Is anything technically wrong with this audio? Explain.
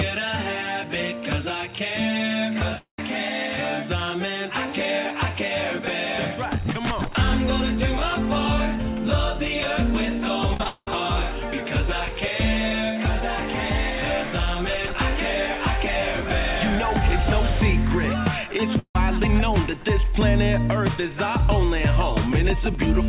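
Yes, there are two kinds of fault, heard through a narrowband call path with nothing above 4 kHz, which fits a G.711-type codec.

Long network dropout at 2.78–2.99 s and 18.79–18.96 s: the audio most likely stopped arriving, so the last sound smears into a fading buzz and then falls into silence before resuming.

Repeated packet loss (robotic sound) at 10.54–10.88 s: four short gaps, the longest 187 ms, are patched back to back, giving choppy stutter with pieces missing rather than one clean silence.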